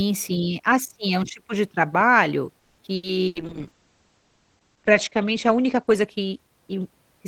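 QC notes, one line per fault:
2.59 to 2.82 s, call audio freeze: just after "um tipo de trabalho" the sound stalls and is stretched into a fading buzz or hiss for about 190 ms, then picks up where it left off with nothing lost. Likely delayed packets leaving the jitter buffer empty, so the receiver kept extending the last sound.
2.95 to 3.06 s and 3.27 to 3.38 s, burst of packet loss: two brief holds, each about 80 ms of fading buzz or hiss, after which the sound jumps ahead. A run of packets was lost or arrived too late, the receiver filled the hole by repeating the last sound, and that stretch of audio is gone.
3.28 s to 7.25 s, call bitrate drop: from "um tipo de trabalho" onward the sound turns rough and muffled, with the top end cut back from 20 kHz to 8 kHz. The encoder rate fell from 40 to 9 kbps, bottoming out for about 1.9 s, so Opus coded more coarsely and dropped high frequencies.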